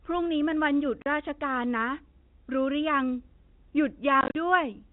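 Speech carried over a G.711 telephone path, with its 4 kHz ceiling audible, suffers packet loss filled with silence. Lost packets are replaced by dead air, cutting a 40 ms hole at 1.02 s and scattering 100 ms of gaps between 4.21 and 4.35 s, in runs up to 40 ms that suggest 10 ms packets.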